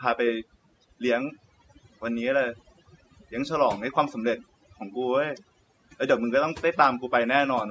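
From start to finish the background is pressed down and dotted with twinkling specks. That is overdone noise removal: a suppressor set too hard shuts off frequency bands sitting near its noise estimate, taking quieter voice detail with them, beneath the call microphone processing's 8 kHz ceiling.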